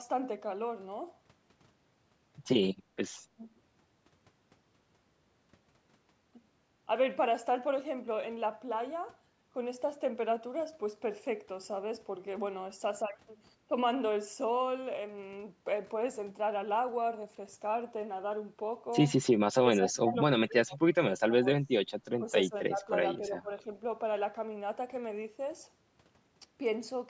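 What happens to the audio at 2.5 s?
Nothing goes wrong at 2.5 s; the speech there comes through intact, carrying only the expected character of call microphone processing, with the lowest bass trimmed and nothing above 8 kHz.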